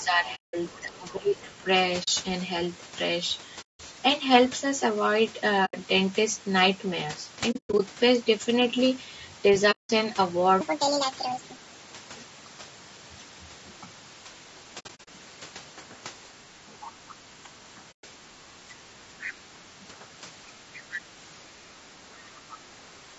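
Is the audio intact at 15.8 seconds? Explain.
No. Throughout the clip, including 15.8 s, speech sounds rough and grainy, likely from low-delay AAC compression near 32 kbps, whose short frames resolve harmonics poorly. A spectrogram shows noise filling the gaps between harmonics below the 8 kHz limit.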